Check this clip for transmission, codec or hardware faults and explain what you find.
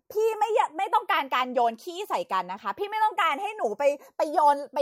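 One fault runs through the whole recording: the two channels drift apart. The left and right sides appear to come from devices on separate clocks, which points to a clock mismatch of around 70 parts per million. The delay between the channels creeps steadily and ends near 0.2 ms. When the speech is summed to mono, the resulting comb notches slide slowly across the spectrum. It sounds like a gradual flanging on the voice.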